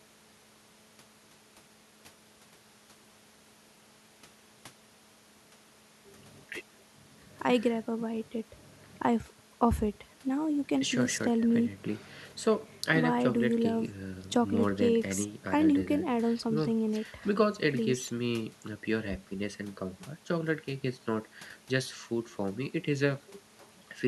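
Listening through the speech recording, nothing stood out as a technical fault at any point.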